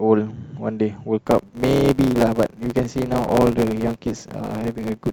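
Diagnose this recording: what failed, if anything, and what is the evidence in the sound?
A block size mismatch (truncated) at the driver or buffer stage. From 1.25 s to the end, the speech carries a buzz at 100 Hz. It runs about 1.09 times fast at near-normal pitch. Each written block loses its tail before being read.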